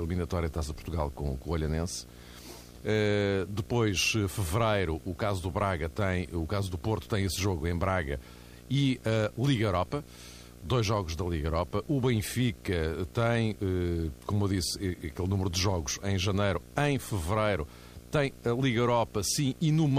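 Video or display buzz runs through the whole recording, a steady hum-like buzz sitting roughly 20 dB under the speech. A screen or video cable near the audio path has coupled its picture timing into the signal, so the buzz repeats at the 60 Hz field rate, with a gritty hash spread above it. Because the interference is continuous and tied to the display, it never lets up between phrases.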